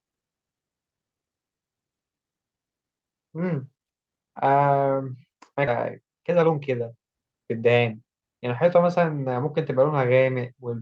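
At 5.67 to 5.69 s there is a skip ahead. Roughly a second of speech is dropped, and playback jumps straight to later audio that was already waiting. Nothing fills the join. The two sides meet almost directly, so the speech lurches forward with no pause. The cut takes about a second off the playback delay in one step. Whatever was said in that second is simply gone.

From 5.71 to 9.27 s comes a jitter buffer speed-up. The buffer was holding more audio than it aims for. To shed the excess, the receiver kept cutting out short pieces one or a few pitch periods long. Together they remove about half a second. The speech runs at 113 percent of normal speed. Pitch stays the same, but the talk sounds hurried until it settles.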